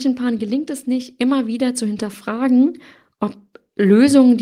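From 0.05 to 0.78 s, automatic gain falling: the control judged the input too loud and eased gain down about 4 dB, so speech and background sink together, a tapering waveform envelope. From 0.85 to 2.84 s, automatic gain rising lifts everything by about 8 dB; voice and noise floor swell jointly, the waveform widening and the spectrogram brightening across all frequencies.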